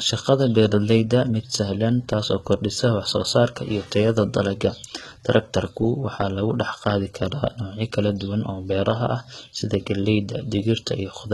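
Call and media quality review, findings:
Gritty, metallic treble and lispy s sounds throughout, nothing above 11.8 kHz. Likely HE-AAC compression, fitting roughly 16 kbps. Treble is rebuilt from copied lower bands.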